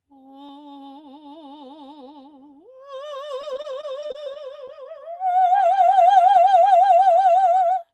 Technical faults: doubled audio track; repeated packet loss (robotic sound)

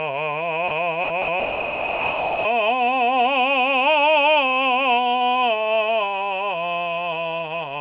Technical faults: sound dropped by the voice detector

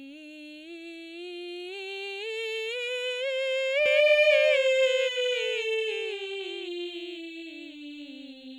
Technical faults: doubled audio track

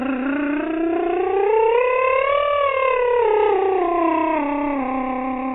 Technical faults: AAC compression

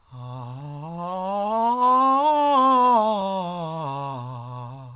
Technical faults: none

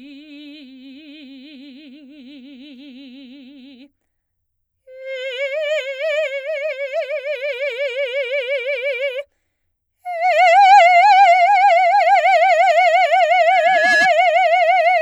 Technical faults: loudspeaker feedback squeal

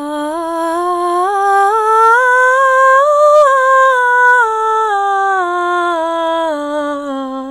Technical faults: hard clipping

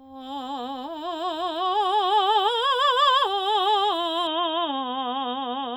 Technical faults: input switched to a poorer device

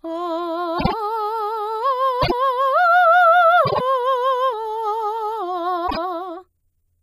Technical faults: frames out of order

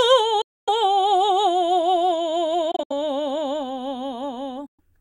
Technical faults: Bluetooth dropout

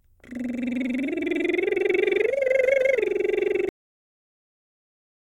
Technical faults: cut-off end

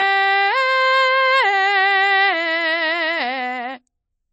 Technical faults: transcoding between lossy codecs

